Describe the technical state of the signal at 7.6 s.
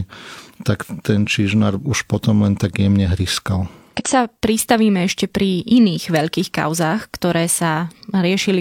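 The signal at 7.6 s is intact, with no audible fault at that point in the speech.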